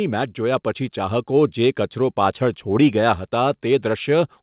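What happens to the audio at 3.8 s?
Nothing goes wrong at 3.8 s: the speech carries on intact there, with only the narrow call-path bandwidth topping out at 4 kHz.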